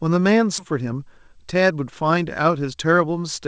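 Skip ahead, at 0.58 to 0.60 s: the speech jumps forward with no filler at the join. Roughly 0.7 s of audio is missing, dropped either in transit or by a jitter buffer that had overflowed while later audio was already queued. The two sides of the gap are spliced almost directly, so the speech lurches abruptly and the listener's delay shrinks by about the same 0.7 s.

Jitter buffer speed-up, from 0.72 to 2.93 s: the speech runs at about 109% of its normal rate with the pitch unchanged, sounding hurried. The receiver's buffer was holding more audio than its target, so it repeatedly trimmed out short slices one or a few pitch periods long to pull the delay back down. Around 0.2 s is removed in total. Throughout, the band stops at 8 kHz, which fits a G.722 call codec at 64 kbps.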